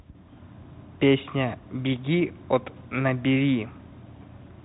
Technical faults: Bluetooth CVSD headset codec

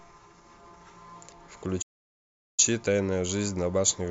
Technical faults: playback stall

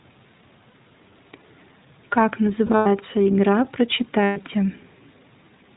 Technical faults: iLBC codec; lost iLBC frames

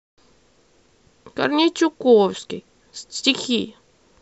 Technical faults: damaged data in a compressed stream

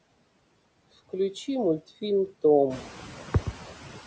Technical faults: noise suppressor artifacts

